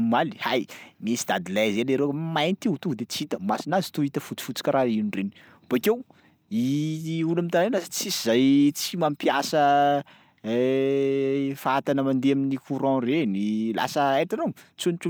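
Nothing stood out on listening to the speech in this recording.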